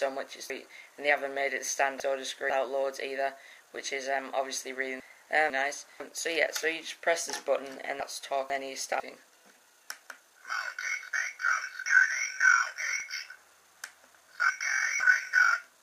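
Chunks out of order at 0.5–2.5 s, 5.0–6.0 s, 8.0–9.0 s and 13.0–15.0 s: a 500 ms block of audio plays one or three blocks later than it should. Nothing drops out, but each reshuffle sounds jumbled and leaves three hard joins.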